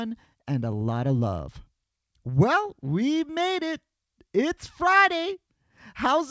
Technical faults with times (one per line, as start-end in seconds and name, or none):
none